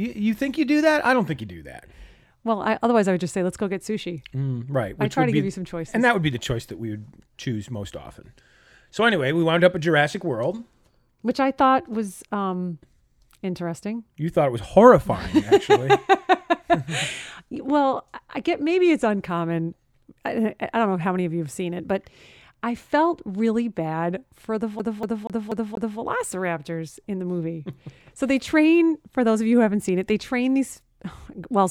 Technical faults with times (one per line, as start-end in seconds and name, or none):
24.79-25.99 CD stuck on one turn